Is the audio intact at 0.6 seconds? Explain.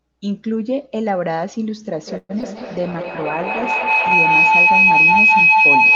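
Yes, the speech at 0.6 seconds is intact, with no fault at that moment.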